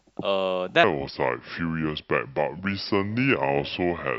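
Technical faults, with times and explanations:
0.84–4.19 s, section at the wrong speed: the speech slows to 0.73x, landing roughly five semitones deeper and sluggish, likely from playback running on a mismatched clock.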